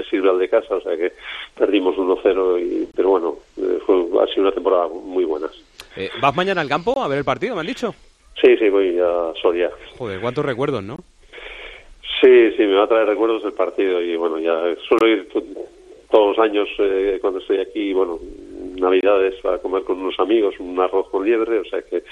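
Brief silent dropouts of about 23 ms cut the sound at 2.92, 6.94, 10.96, 14.99 and 19.01 s, every 4 s. These are gaps at joins of encoded pieces, where untrimmed encoder delay and padding remain at each seam.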